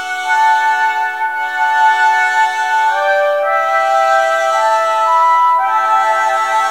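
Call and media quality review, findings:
Grainy, signal-following distortion throughout; quiet passages turn gritty, faintest parts sputter or drop out. Likely low bit depth without dither, consistent with 8-bit truncation. Error tracks the waveform, sitting around 40 dB below the signal.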